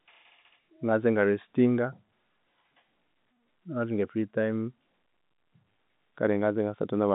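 No faults are present; the speech carries the narrow 150 Hz to 3.7 kHz band of G.711 telephone coding, with nothing above about 3.8 kHz.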